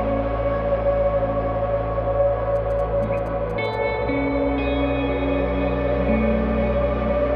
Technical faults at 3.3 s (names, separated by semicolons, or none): GSM signalling bursts